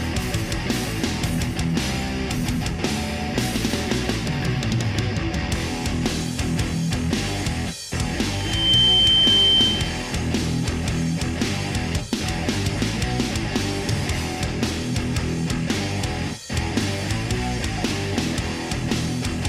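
A loudspeaker feedback squeal breaks out from 8.33 to 10.11 s: the microphone is re-capturing its own loudspeaker, and at 3.1 kHz the loop gain tops one. That tone swells over under half a second to about 10 dB above the surrounding sound, then stops.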